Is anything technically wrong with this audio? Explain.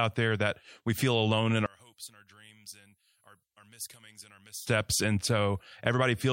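Yes. From 1.66 to 4.67 s, just after "we feel alone in", the speech drops about 22 dB and turns faint. This is likely one channel inverted, so the shared centre cancels in mono. A plain gain drop would keep the body and bass.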